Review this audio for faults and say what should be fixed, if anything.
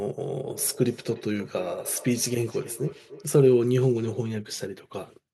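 Feedback echo between two devices runs from 0.54 to 3.34 s. A second device in the room replays this microphone's sound, which gets picked up again. Speech recurs roughly every third of a second, about 18 dB down, showing as faint, thinner spectrogram copies. To prevent it, leave only one device's microphone and speaker active on the call.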